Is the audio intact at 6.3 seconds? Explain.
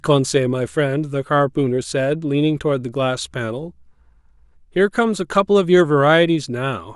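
Yes, the speech at 6.3 seconds is intact, with no fault to be heard at that moment.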